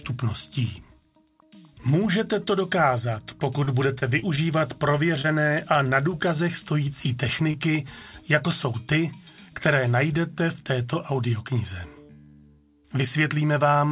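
Repeated packet loss, giving a robotic sound, runs from 3.64 to 5.26 s. Over that stretch, seven separate holes open in the stream, the longest about 30 ms. Each is patched by extending the last received sound, about 145 ms of fill in total and roughly a tenth of the span. The gaps come close together, so the audio turns choppy, with small pieces missing.

Short concealed packet loss follows at 7.51 to 7.56 s. A 20 ms piece of audio arrived too late for the decoder, and the receiver covered it with about 25 ms of continued sound before blending back into the real signal. It comes across as a brief smear or wobble. Like the rest of the clip, it is confined below 4 kHz by the call path, whose band limit fits G.711 mu-law coding.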